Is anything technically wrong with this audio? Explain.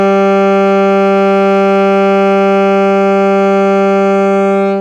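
No, nothing technically wrong stood out on listening to this music.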